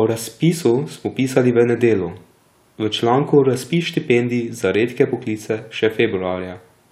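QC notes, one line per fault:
1.55 s, bit error spike: right after "razpisu smo pisali" there's one sharp tick, a single sample that leaps away from the waveform and snaps straight back. That's a flipped bit in memory or on a digital link, so the sample's value jumped by a power of two. Because it's one sample wide and has nothing to do with the speech around it, the energy spreads across the whole spectrum and you hear a bright, isolated click.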